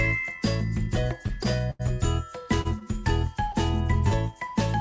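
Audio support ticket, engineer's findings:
Held, smeared sound with faint buzz or dip at 1.43, 1.70 (longest, about 90 ms), 2.61, 2.79, 3.52 and 4.08 s. Short stalls from late packets: jitter buffer ran dry, receiver stretched last audio, then resumed with nothing lost. Band stops at 8 kHz, consistent with wideband G.722.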